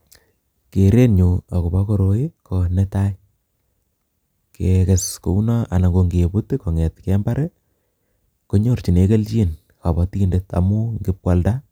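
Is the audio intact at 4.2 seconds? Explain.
Yes, the speech at 4.2 seconds is intact, with no dropout, click or other fault at that moment.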